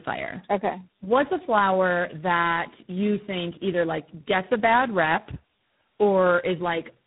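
Tandem speech coding runs throughout. Three speech codecs seem chained, each recoding the last one's errors. Speech sounds rough, warbly and muffled, with nothing above 3.8 kHz.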